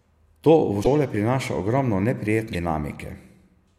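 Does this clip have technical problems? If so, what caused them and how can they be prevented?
Yes. The speech skips ahead with a brief glitch at 0.82 to 0.87 s and again at 2.52 to 2.55 s, each a few tens of milliseconds long. This is likely a broken MP3 bit reservoir. After frames of about 26.1 ms are dropped, the next frame reads borrowed bits from the wrong frame's data and decodes garbage for a moment. To prevent it, avoid dropping frames when cutting or streaming MP3, or disable the reservoir when encoding for lossy transport.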